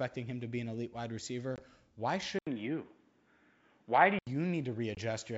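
From 1.56 to 1.62 s the speech drops into a hard-edged hole, then comes back with a brief, slightly distorted patch before settling. This is packet loss on an ADPCM call. About 20 ms of audio went missing, which fits a couple of lost packets, and the decoder's adaptive predictor and step size then had to resynchronise with the sender's.

At 2.39 s there is a short gap of about 80 ms, after which the sound turns dull and boxy, shifts in level by a few decibels, and carries a faint new background noise far beneath it. Nothing above 3.8 kHz gets through until 4.27 s, when the clarity returns. The likely cause is the input switching to a poorer device mid-recording, whose narrower band cuts off the top that the 64 kbit/s G.722 coding otherwise carries.

At 4.95 to 4.98 s the same ADPCM packet-loss fault recurs: a sudden silent hole of about 20 ms, followed by a slightly distorted return while the decoder's predictor state catches up again.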